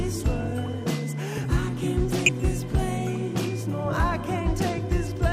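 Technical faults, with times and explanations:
2.26 to 2.29 s and 3.88 s, DAB burbling: two brief patches of burbling noise blips sit on top of the programme, the second shorter. Weak reception let bit errors slip past the error correction into the MP2 audio stream, and corrupted samples put short blips of noise in single sub-bands. The sound points to an error rate of roughly a tenth of a percent, a little higher at the second event.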